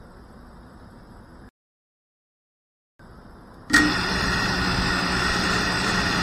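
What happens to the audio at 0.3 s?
Nothing goes wrong at 0.3 s; the audio plays through that moment intact, with no dropout, click or distortion.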